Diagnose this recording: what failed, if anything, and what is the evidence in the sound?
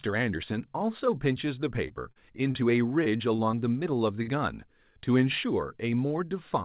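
Short concealed packet loss at the network stage, near 1.88, 2.12 and 2.52 s: brief smears where the receiver extended the last sound. The spectrogram shows short, blurred, repeated harmonic stretches.

Repeated packet loss (robotic sound) from 3.04 to 3.55 s: four gaps, the longest 28 ms, patched in quick succession, sounding choppy with pieces missing. The waveform shows stuttering, periodic copies.

A burst of packet loss at 4.23 to 4.29 s: the concealment holds and fades the last sound, then resumes further on. The waveform shows a decaying, smooth stretch, all heard through a band ending at 4 kHz.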